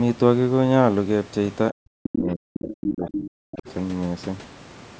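From 1.72 to 3.67 s the speech sinks in and out, at its deepest around 40 dB down, over roughly two seconds. This is speech suppressed in double talk, likely an echo canceller treating overlapping speech as echo and attenuating everything together.

Overlapping that stretch, at 2.54 to 2.84 s, 3.08 to 3.29 s and 3.53 to 3.74 s, the other side's voice is leaking through in brief scraps, about 10 to 25 dB below the speech. The likely cause is loudspeaker pickup that the echo canceller failed to remove. The call microphone processing limits content to 8 kHz.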